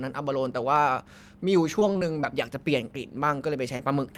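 Repeated packet loss (robotic sound) runs from 1.79 to 2.25 s. Four separate gaps open in quick succession, together about 80 ms of missing speech, the longest only 22 ms. Each gap is patched by extending the sound just before it, so roughly a sixth of that half-second is synthetic fill. Because the patches follow one another so closely, the speech turns choppy, with small pieces dropped out.

Short concealed packet loss follows at 3.77 to 3.81 s, where about 20 ms of audio failed to arrive in time for decoding. The receiver bridged the hole by continuing the preceding sound, reusing its pitch where it was voiced or shaped noise where it was not, then faded back into the real signal. It is heard as a brief smear or wobble in the speech at that moment.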